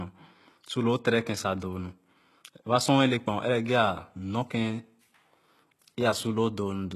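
A speech recording that appears to have passed through a very low-bitrate encoder, likely HE-AAC compression at a rate around 16 kbps, with the treble rebuilt from copied lower bands. Throughout, sibilants sound gritty and lispy, the highs don't match the lower harmonics, and nothing remains above 12.3 kHz.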